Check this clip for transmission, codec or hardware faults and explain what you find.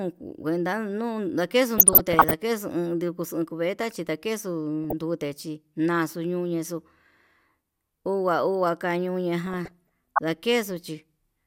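One transmission fault recurs three times: DAB burbling, from 1.78 to 2.34 s, 4.84 to 5.02 s, and 9.46 to 10.19 s. Weak reception let bit errors, on the order of half a percent, slip past error correction into the MP2 audio data. Corrupted samples put short blips of noise into individual sub-bands, and corrupted scale factors throw sub-bands up or down in level for up to a frame, laying blips and level jumps over the speech.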